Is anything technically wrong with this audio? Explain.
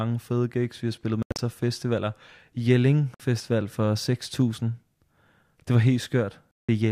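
Yes, there are three gaps that sound like a Bluetooth dropout, most likely from packets not reaching the headphones in time. The speech cuts abruptly to silence and resumes further along, as if it had kept playing: at 1.23–1.39 s, between "gigs vi har spillet" and "af festivaler", as broken bits with the longest hole about 80 ms; at 3.14–3.20 s; and at 6.55–6.69 s.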